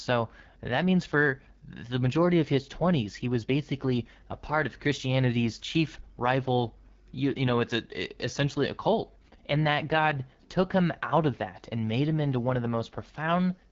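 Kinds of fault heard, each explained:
AMR wideband (HD Voice) codec: A low-rate AMR-WB encoder models the vocal tract with coarse pulse excitation and substitutes shaped noise above 6.4 kHz. The speech sounds plainly rough and raspy, with nothing above 7.3 kHz, which fits the 8.85 kbit/s mode.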